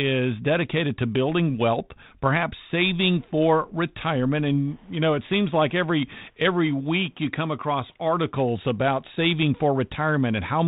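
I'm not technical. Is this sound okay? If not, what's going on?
Yes, no faults here.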